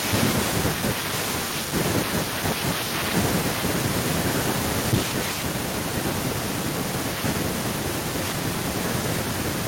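From 4.68 to 4.98 s, microphone overload, likely from input gain set too high, drives peaks about 14 dB past the converter's limit, flattening around 7 percent of samples into harsh crackle. At 4.94 s the microphone volume is stepped down by about 2 dB, most likely the call software reacting to that clipping, so speech and background suddenly drop slightly in level.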